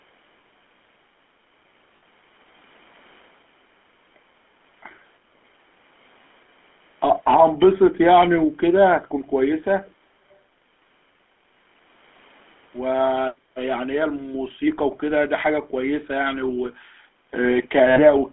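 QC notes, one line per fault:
Throughout, GSM full-rate codec: there's a steady buzzy, gravelly roughness on the speech, the kind you get when the voice is rebuilt from a vocal-tract model driven by coarse, regularly spaced pulses. It fits the 13 kbps full-rate codec. The line band runs roughly 200 Hz to 3.4 kHz, so the top end is gone and the low bass is trimmed. The damage is plainly audible, not subtle.
1.96–2.03 s and 17.9–18.0 s, lost GSM frames: two short dropouts, each about 60 ms, which fits three lost 20 ms frames in a row. You don't get silence. The decoder keeps replaying the last good frame's settings, so each gap comes across as a brief rough, metallic ring holding the sound in place. They're too short to fade all the way out.
9.85–9.91 s and 10.31–10.38 s, echo leak: two tiny scraps of a delayed copy of the speech, arriving about 0.38 s after the original. They're very faint, way down under the main speech. 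The likely cause is that the far end is on a loudspeaker and its echo canceller let a bit of the pickup slip through and back down the line.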